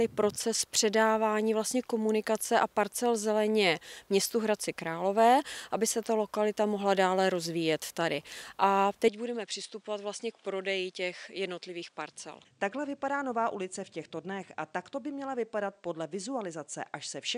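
At 9.08 s the sound abruptly narrows and stays that way to the end, with nothing above about 10.1 kHz, a level drop of roughly 5 dB and a faint new noise floor, with no gap at the transition. This points to an input likely switched to a poorer device.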